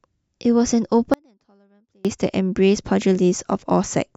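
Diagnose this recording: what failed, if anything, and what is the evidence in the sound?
An audio dropout to a faint residue runs from 1.14 s to 2.05 s, about 0.91 s of lost speech. The level falls abruptly rather than fading, and the gap is not silent: a faint sound remains, roughly 35 dB below its normal level, before full level returns just as suddenly. The downstream path stayed live while the main feed was interrupted, which points to a momentary break in the analogue wiring or connector as the likely cause.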